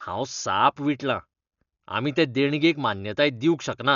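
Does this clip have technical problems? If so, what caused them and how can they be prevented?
Yes. Throughout, the speech is dull, with nothing above 7 kHz and a rough, fluttering noise around tonal sounds, likely from heavy Dolby Digital compression at a very low bitrate, around 48 kbps. Unlike a plain low-pass filter, the encoder starves many frequency lines of bits and the decoder fills them with dither noise, so the sound is muffled and grainy rather than merely muffled. To prevent it, encode at a higher bitrate or keep an uncompressed source for processing.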